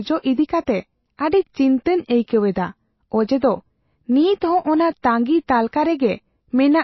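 Throughout the speech, nothing is heard above about 5.8 kHz, and what remains has a watery, swirling texture, with faint tones flickering in and out. This is the plainly audible damage of MP3 compression, likely from a very low bitrate, something near 24 kbps. The encoder cut the treble outright and dropped weak frequency lines frame by frame. Unlike a simple low-pass filter, which dulls the sound but leaves it steady, this loss keeps shifting.

At 1.31 s a brief hiss, spread over about 13 ms, comes just before a sharp onset, and the attack itself sounds softened. This is pre-echo. The codec spread its quantisation noise across the whole block, so noise sized for the loud attack also filled the quiet moment ahead of it. A click or dropout would be a separate disturbance, but this hiss is tied to the attack and comes only before it.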